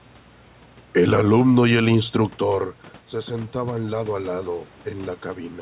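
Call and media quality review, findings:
Automatic gain rising, 2.13–4.6 s, after "alumno y el": AGC ramps about 5 dB following a level drop near 2.0 s; room noise swells with the voice, unlike a talker simply approaching.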